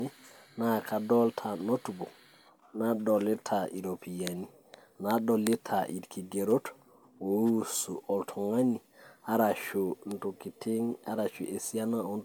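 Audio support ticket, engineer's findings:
Swirly, hollow coloration across the whole speech clip, with smeared consonant onsets and blurred attacks; degradation heavier than a single encode near 138 kbit/s would give. Content stops at 20.1 kHz. Likely generation loss: repeated MP3 decode/re-encode, around four passes, each requantising on a shifted frame grid so noise and spectral holes accumulate.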